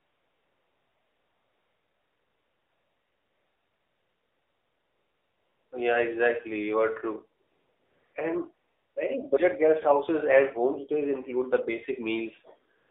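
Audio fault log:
Throughout: AMR narrowband mobile codec. The speech passes through a 300 Hz to 3.6 kHz telephone band and is rebuilt from a vocal-tract model driven by sparse pulses at 7.4 kbps, so it sounds plainly buzzy and synthetic. On a spectrogram, nothing appears above 3.6 kHz.
0.00–5.72 s, 7.42–8.14 s, 8.54–8.96 s, 12.78–12.90 s: AMR comfort noise. With no speech frames being sent, the receiver fills these gaps with smooth synthetic noise built from a coarse level and spectrum estimate. On the waveform each gap shows as a flat, even band. On the spectrogram it is a uniform wash with hard edges at the switch points.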